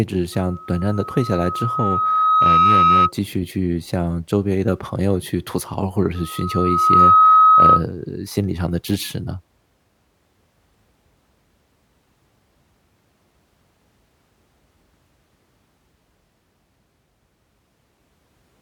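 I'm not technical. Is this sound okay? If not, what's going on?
No. There is loudspeaker feedback squeal from 0.32 to 3.12 s and again from 6.15 to 7.84 s. The microphone picks up its own loudspeaker, so a single 1.3 kHz tone swells up until it is louder than the speech.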